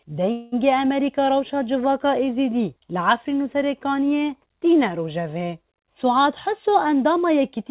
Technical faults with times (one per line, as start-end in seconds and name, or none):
0.32-0.54 call audio freeze
6.04-7.71 jitter buffer speed-up